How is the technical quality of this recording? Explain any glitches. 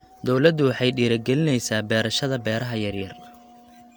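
No glitches or technical faults are audible anywhere in the recording.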